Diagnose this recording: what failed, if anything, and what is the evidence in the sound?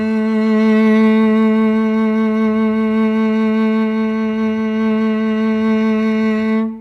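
Nothing in this music recording points to a failure at any stage of the chain. The sound gives no evidence that would implicate the wiring, conversion, processing, transport, storage or playback.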